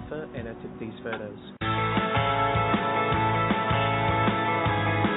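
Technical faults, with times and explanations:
No technical faults detected anywhere in the clip.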